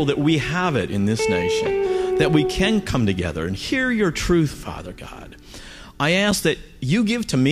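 Twice the output dropped to zeros, a block of digital silence: at 0.88 s, about 1 ms, heard as a tick; at 6.31 s, 5.8 ms, fitting a 256-sample buffer, heard as a tick or dip.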